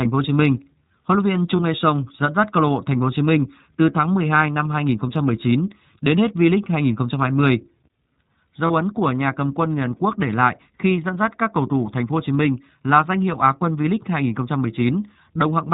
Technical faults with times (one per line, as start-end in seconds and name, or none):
0.00-15.74 iLBC codec
1.56-1.60 lost iLBC frames
8.67-8.71 lost iLBC frames